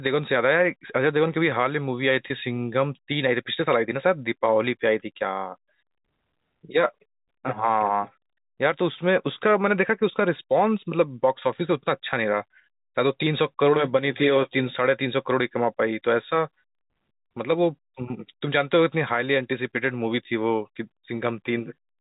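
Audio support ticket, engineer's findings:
Packet loss with pitch repetition, 2.28 to 2.30 s. Brief held, buzzy tone in the speech. About 20 ms of audio missing, which fits two 10 ms packets. Receiver concealment repeated the last pitch period across the gap. Component: jitter buffer or network path. Telephone band limit at 4 kHz audible throughout, consistent with G.711 A-law at 64 kbps.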